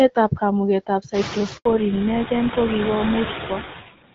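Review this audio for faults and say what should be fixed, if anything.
A noise suppressor runs through the whole clip, pulling bands it judges to be steady noise down by about 9 dB frame by frame. Because the room noise climbs sharply, by about 17 dB from roughly 1 s, the suppressor is working hard on it: the leftover noise pumps down between phrases and swells back under the speech. Prevention: set the suppressor to adapt more slowly and cut less deeply when background noise is this high.

A handover gap opens from 1.57 to 1.65 s. The call was moved between networks, and for those 80 ms no speech frames arrived, so the voice dies away within a few tens of milliseconds into silence and whatever was spoken in that window is simply gone. Prevention: use make-before-break handover so the new link is carrying frames before the old one is released.

A fallback to narrowband follows immediately, from 1.65 s to the end. 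After the handover the call left the HD Voice path, whose light coding at a rate that fits 12.65 kbit/s AMR-WB was clear before the switch, and continued on an older codec that fits GSM full rate. Nothing above 4 kHz survives from that point, so the speech turns duller and rougher, losing its crisp consonant detail. Prevention: make sure the target network supports and negotiates wideband codecs so HD Voice carries through the handover.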